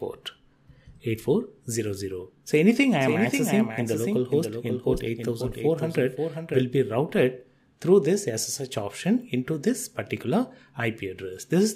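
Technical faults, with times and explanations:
2.79 to 6.63 s, doubled audio track: a second full-band copy of the sound runs about half a second behind the original, roughly 5 dB quieter, and it is likely caused by the signal being picked up again through a slower path or by an edit leaving two copies out of step. The copy carries no decay or room colouring, so it reads as a distinct repeat rather than an echo, and it cuts in and out abruptly at both ends of the span.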